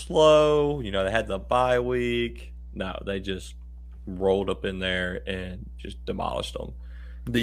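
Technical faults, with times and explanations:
Throughout, mains hum: a steady low tone at 60 Hz sits under the speech for the whole clip, fairly prominent at roughly 15 dB below the speech level. It comes from the power line leaking into the signal through a ground loop or a nearby transformer. Unlike wind rumble or handling noise, it holds a fixed pitch and level and never fluctuates with the speech, and its tonal character separates it from broadband hiss.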